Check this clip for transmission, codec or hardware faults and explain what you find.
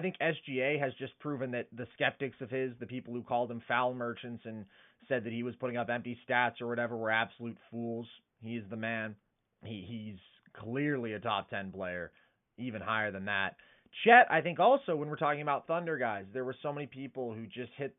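Nothing stood out on listening, apart from the room's own background noise sitting about 51 dB below the speech.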